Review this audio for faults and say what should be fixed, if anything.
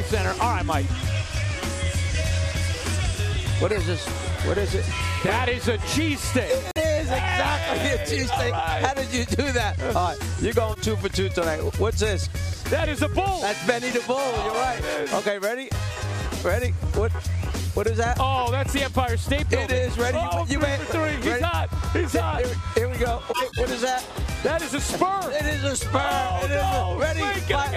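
Corrupt frame decoded occurs three times: 3.71 to 3.84 s, 10.71 to 10.79 s, and 23.29 to 23.64 s. Damaged bits reached the decoder, and it played those frames anyway. Misread gains and codes put energy at the wrong frequencies. The results are brief chirps and noise bursts. The first spans about three frames, and the second a couple. The third is longest, roughly seven frames and 0.35 s. Prevent this by protecting the stream with checksums and rejecting frames that fail.

Corrupt frame muted occurs once, from 6.71 to 6.81 s. The decoder refused two damaged frames, and the player filled their place with silence. The result is a hole of about 0.1 s that starts abruptly. Timing is kept, so the sound resumes on schedule. Prevent this by using packet-loss concealment or forward error correction instead of inserting plain silence.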